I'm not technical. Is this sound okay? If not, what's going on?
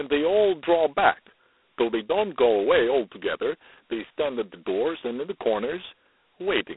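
No. The speech has G.726 ADPCM damage from start to finish. This is a telephone coding method that doesn't store the sound directly. It keeps guessing the next moment and saves only a tiny correction. Here it runs at its lowest setting, so the corrections are too rough, and the errors come out as a harsh, rasping hiss that gets louder when the speech does. Everything above about 3.9 kHz is gone, so it sounds thin and phone-like.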